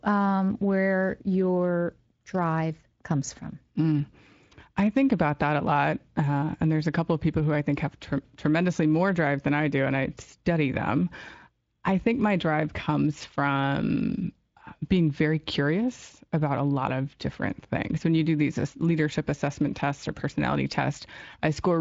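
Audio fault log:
No faults are present in this speech recording. It has passed through a Speex codec working as designed, with nothing above about 7.6 kHz and a light coding texture that fits a bitrate near 24 kbps.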